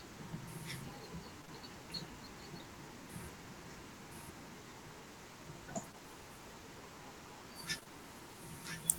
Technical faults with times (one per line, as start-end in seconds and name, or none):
1.41-1.49 short concealed packet loss
5.91-5.96 short concealed packet loss
7.79-7.87 short concealed packet loss